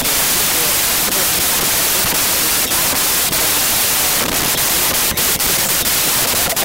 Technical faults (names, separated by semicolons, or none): wrong sample width